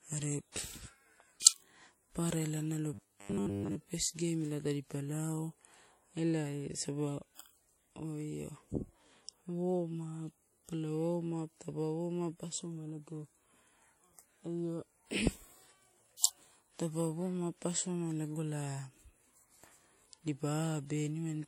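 Throughout the clip the speech has a dull top with nothing above 16.6 kHz, and two kinds of compression artefact are heard together. This is likely transcoding between lossy codecs, and it fits an earlier WMA pass at about 48 kbit/s re-encoded to MP3 at about 64 kbit/s.

From 2.94 to 3.76 s, just after "papara ela nalo", the speech collapses into a rigid, metallic buzz pitched at 100 Hz. It only loosely follows the syllables until "first game ela tadipa" returns. This is robotic sound from repeated short buffers: new audio likely arrived too slowly, so playback looped a roughly 10 ms slice again and again. That repetition imposes a buzz at 100 Hz while most of the real signal in that stretch is skipped.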